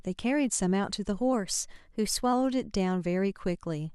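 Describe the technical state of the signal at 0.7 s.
At 0.7 s the speech signal is intact, with no audible fault at that moment.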